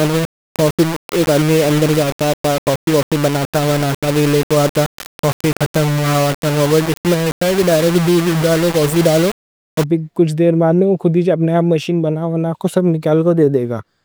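From the start until 9.84 s, just before "کچھ دیر", the speech is coated in a coarse, grainy distortion that shifts with every syllable, gritty on quieter passages and sputtering or dropping out entirely in the softest moments. The error sits only about 10 dB below the speech. The likely cause is low bit depth without dither: the audio was rounded to very few levels, which fits around 3 bits, so the error tracks the signal instead of forming steady hiss.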